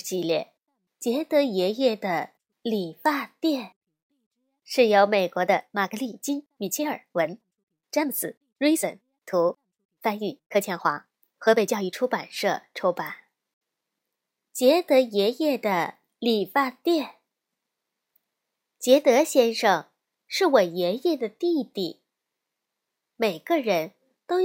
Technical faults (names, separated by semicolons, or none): time-stretched section